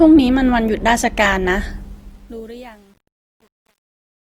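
From the start, the speech carries grainy, rough texture in its tonal parts, likely from Opus compression in its music (CELT) mode at a low rate, consistent with around 24 kbps. Bands short of bits are filled with folded or noisy content, though the bandwidth stays full, reaching about 20.2 kHz.

From 1.69 s, truncation distortion on a fade appears as the level drops in the fade-out, which runs from roughly 1.69 s to 4.22 s. The fade stage keeps too few bits without dither, suggesting about 9-bit resolution. From 2.19 s to the end the tail turns gritty.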